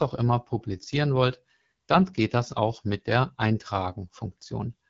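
Throughout the speech, the signal has passed through the AMR wideband (HD Voice) codec at one of its lowest rates; the roughness fits about 8.85 kbit/s. At that rate the pulse-driven vocal tract model has too few bits to capture the voice below 6.4 kHz, so the codec damage is plainly audible as a rough, raspy texture. The top band is filled with shaped noise, and nothing is present above 7.5 kHz.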